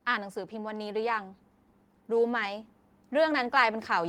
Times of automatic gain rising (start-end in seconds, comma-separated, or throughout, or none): 0.05-1.39, 2.08-4.08